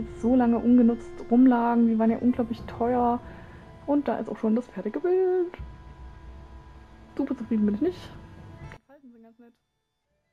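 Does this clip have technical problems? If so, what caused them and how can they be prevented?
Yes. From 8.77 s to the end at 10.32 s, one stereo channel has likely been inverted in polarity, so when the two channels are summed to mono, everything common to both cancels. The sound drops by about 29 dB and only the small difference between the channels survives, leaving a faint remnant instead of the full signal. Checking polarity on every channel and monitoring a mono fold-down before release would catch this.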